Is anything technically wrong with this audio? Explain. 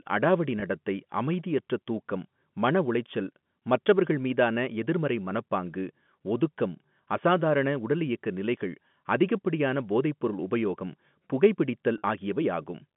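Yes. There is packet loss with pitch repetition at two points: 0.60 to 0.62 s, just before "நடத்தை அமைதியற்ற தூக்கம் மனஉளைச்சல்", and 11.98 to 12.02 s. The receiver fills each gap by looping the last pitch period. The first gap is 20 ms, which fits one lost packet, and sounds like a brief held, buzzy tone. The second is 40 ms, consistent with two consecutive packets, and the signal then resumes through the band-limited G.711 telephone path.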